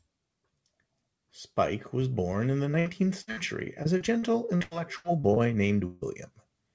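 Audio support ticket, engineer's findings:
Repeated packet loss (robotic sound), 2.72–3.39 s. Choppy, robotic texture. Four short holes, longest 61 ms, roughly a quarter of the stretch patched. Jitter buffer concealment extending the last sound, then losing packets again before recovering.

Repeated packet loss again, 3.83–5.38 s. Same robotic chop. Nine holes, longest 86 ms, roughly a quarter of the span concealed. About 0.38 s of real audio never arrives. Same receiver-side concealment repeating over and over.

Burst of packet loss, 5.86–6.03 s. One continuous dropout, about 150 ms synthesized. The last sound is held and turned down, with no true silence. Audio resumes later, with about 140 ms of content missing. Several consecutive packets lost or arriving too late to play. G.722 call path at 64 kbps, band-limited to 8 kHz.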